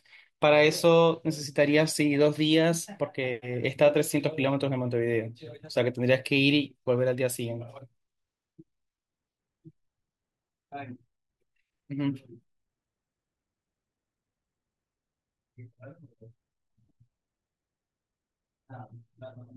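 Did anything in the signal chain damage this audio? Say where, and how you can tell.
No, nothing along the chain has left a mark on this speech that I can hear, so there's no stage to point at.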